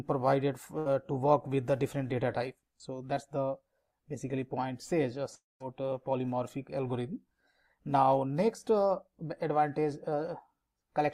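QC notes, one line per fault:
0.78–0.86 s, burst of packet loss: the sound is carried on as a brief held buzz or hiss that fades, then resumes about 70 ms further along with that stretch missing. The gap is short and never reaches silence, unlike a dropout, which fits a few consecutive packets going missing.
5.35–5.61 s, long network dropout: the last sound is stretched briefly, decays, then gives way to about 180 ms of silence before audio returns with roughly a quarter second lost. That silent tail separates it from a packet-loss burst, likely from the stream stalling entirely.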